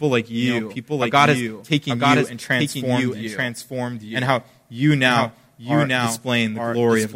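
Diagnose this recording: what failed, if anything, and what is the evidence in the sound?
What failed is a doubled audio track. The whole speech clip carries a second full-band copy of itself trailing about a second behind, roughly 5 dB below the original. It's clean, with no decay or room colour, so it isn't an echo or reverb. Most likely the same signal got mixed in twice: either picked up again through a slower capture path at the driver or buffer stage, or left as two out-of-step copies during an edit.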